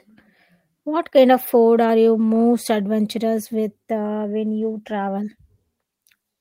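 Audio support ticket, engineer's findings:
No audio faults found on review of the speech clip; nothing to attribute to any component.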